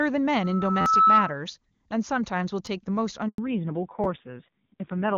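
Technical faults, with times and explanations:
0.35–1.39 s, loudspeaker feedback squeal: a single tone near 1.3 kHz swells over roughly 0.7 s until it sits about 10 dB above the speech, then stops. The microphone is picking up its own loudspeaker, and at that frequency the loop gain exceeds one, so the tone feeds itself.
0.81–0.86 s, 2.66 s and 4.04 s, repeated buffer: brief stutters, a rapid buzz-like repeat in the middle of the squeal and single clicks at the later two. Fresh audio arrived late, so the device replayed its last block, about 11.6 ms each, which fits a 512-sample buffer: four extra plays the first time, one at the others.
3.28–3.38 s, handover gap: the speech fades out almost instantly and leaves about 100 ms of silence. The call was switching networks, and no speech frames came through until the new link was up, so whatever was said in that moment is gone.
3.38 s to the end, fallback to narrowband: right after the gap the speech turns dull and rougher, with nothing above 4 kHz. 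The call dropped from the HD Voice wideband codec to a low-rate narrowband one, which fits AMR-NB at around 5.9 kbit/s.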